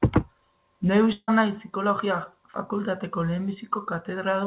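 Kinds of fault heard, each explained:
Long network dropout: packets likely stopped reaching the receiver for about 160 ms, from 1.12 to 1.30 s, leaving it nothing real to play. To cover the gap, it stretched the last sound into a buzz that fades over about 156 ms. Roughly 30 ms of near silence follows, and then the speech resumes with the lost stretch simply missing. All of this stays within the 4 kHz band of the call's G.711 A-law path.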